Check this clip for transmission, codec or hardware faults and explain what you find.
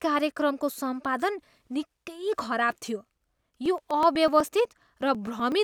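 From 3.04 s to 5.52 s, periodic USB or driver dropouts occur. Every 0.12 s, a blocked USB bus or driver skips about a millisecond of audio. Roughly twenty occur. Where they fall on speech they leave ticks, evenly spaced, like a steady clicking.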